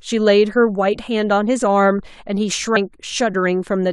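At 2.75 s some compressed frames get skipped: a few 23.2 ms frames go missing, so the speech jumps ahead about 70 ms.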